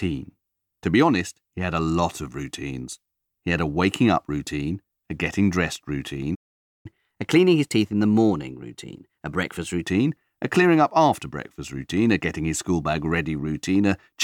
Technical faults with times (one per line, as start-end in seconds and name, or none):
6.34-6.86 playback stall
6.86-9.86 catch-up at higher speed